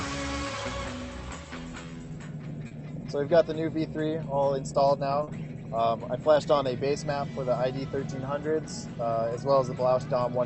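At 2.67 s and again at 5.23 s there's short concealed packet loss: about 40 ms of audio arrived too late each time, so the receiver extended the preceding sound to fill the gap. You hear a quick smear or wobble before it blends back in.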